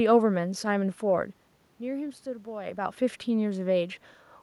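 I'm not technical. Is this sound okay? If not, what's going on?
Yes, nothing stood out as a problem when listening to this clip.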